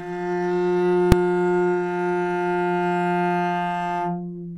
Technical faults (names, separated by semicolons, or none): invalid numbers at full scale